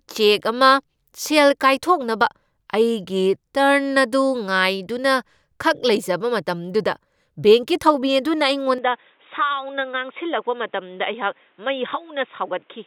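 Speech, and at 8.78 s it abruptly turns dull and boxy for the rest of the clip, with nothing above about 3.8 kHz, the level dropping by roughly 5 dB and a new background noise sitting about 40 dB below the speech. The change happens with no gap. It is likely an input switched to a poorer device. What separates it from a plain bandwidth or codec drop is that the tone, level and noise floor all shift together at one instant.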